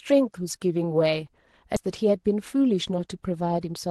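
At 1.76 s the speech jumps forward in a skip ahead. Roughly 0.7 s of audio was discarded and the two sides were spliced with no silence between them. Unlike a dropout, there is no gap or fill, just an abrupt join where material is missing.

From 3.58 to 3.87 s a jitter buffer speed-up trims short pitch-period pieces to shrink a backlog, removing a few tens of milliseconds in total. The speech runs at about 109% speed and sounds hurried, but the pitch stays the same, unlike a faster playback rate, which would also raise the pitch.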